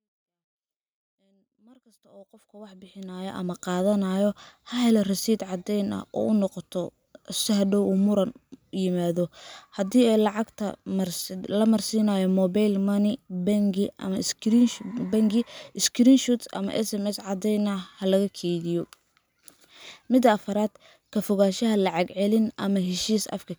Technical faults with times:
none

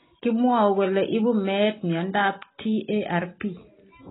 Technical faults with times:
0.00-4.11 AAC compression

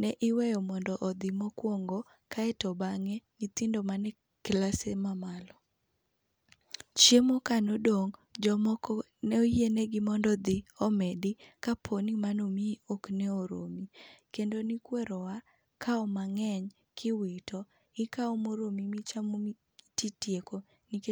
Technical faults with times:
none

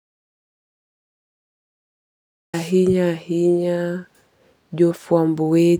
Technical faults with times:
0.00-2.54 audio dropout to silence

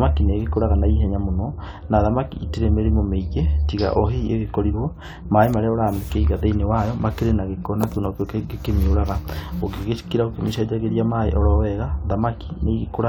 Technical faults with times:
0.00-13.09 mains hum

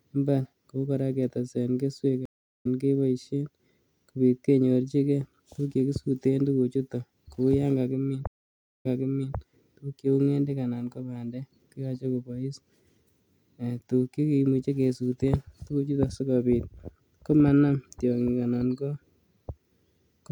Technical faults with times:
2.25-2.67 stream reconnect
8.27-9.36 stream reconnect

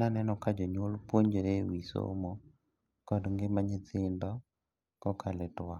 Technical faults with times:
none

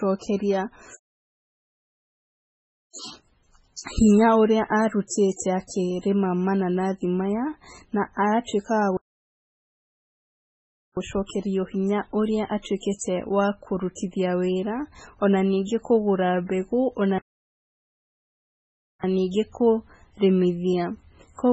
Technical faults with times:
0.00-21.53 MP3 compression
5.07-5.11 pre-echo
5.36-5.39 pre-echo

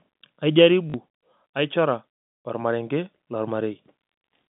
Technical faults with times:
0.90-0.94 packet loss with last packet repeated

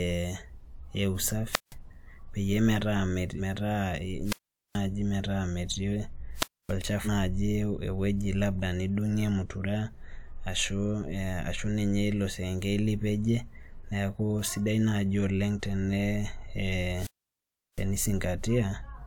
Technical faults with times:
1.48-1.75 wireless microphone squelch dropout
3.37-3.40 compressed frames skipped
4.23-4.80 wireless microphone squelch dropout
6.35-6.75 wireless microphone squelch dropout
7.04-7.08 compressed frames skipped
16.94-17.86 wireless microphone squelch dropout

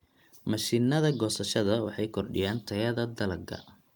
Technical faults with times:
none

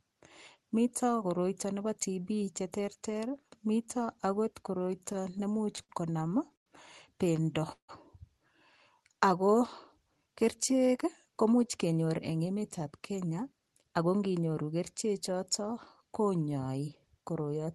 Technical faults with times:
4.99-6.68 repeated stalls (stutter)
7.72-7.90 call audio freeze
11.04-13.90 jitter buffer speed-up

